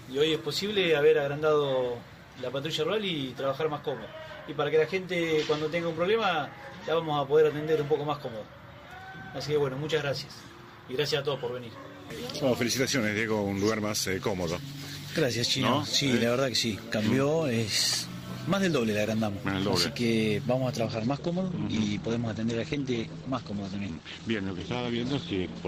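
The audio plays at its higher quality until 20.86 s, then switches abruptly, with no gap, to an adaptive stream at a lower bitrate for the rest of the clip. From that point the treble stops at about 8.9 kHz, and the top end takes on a thinner character as codec artefacts rise. The sudden step is typical of a player dropping to a cheaper rendition when throughput falls, and the sound points to something like Opus at 16 kbit/s in place of roughly 64 kbit/s.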